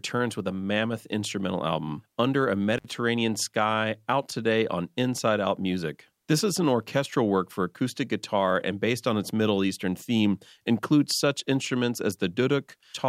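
At 2.78 to 2.85 s an intermittent contact, a loose connection briefly opening for 62 ms, cuts the speech out with crackle at the edges, unlike a clean digital dropout.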